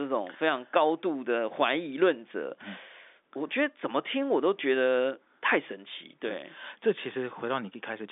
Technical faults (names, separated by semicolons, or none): none